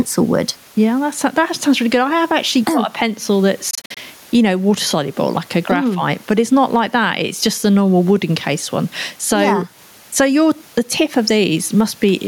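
Gain pumping runs through the whole recording. The level rises in quieter stretches and drops back under louder syllables, a swing of around 10 dB. This is likely a gain set too high for the microphone, with a fast limiter or compressor clamping down whenever the speech gets loud and then releasing. Loud and soft passages are pushed closer together, so the speech sounds squashed. The room noise sits about 38 dB below the speech.

A Bluetooth dropout follows from 3.71 to 3.99 s. The sound breaks into several short gaps, about 128 ms of missing audio in all, scattered across roughly a quarter of a second, with the longest single hole about 43 ms. When the speech comes back it has moved on, as if it kept playing through the gaps. This fits about six packets likely arriving too late at the headphones and being discarded.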